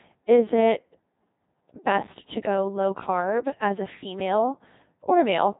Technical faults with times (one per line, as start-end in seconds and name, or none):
0.00-5.59 Codec 2 vocoder